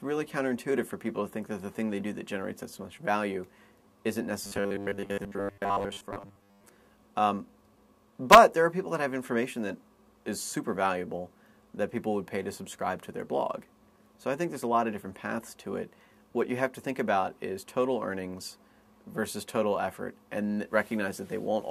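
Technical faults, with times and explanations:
4.45–6.64 s, robotic sound from repeated short buffers: a rigid metallic buzz locked at 100 Hz replaces most of the real sound, likely from a 10 ms stretch looped while new audio arrived too seldom; unlike a stutter, the repeats fuse into one steady pitch.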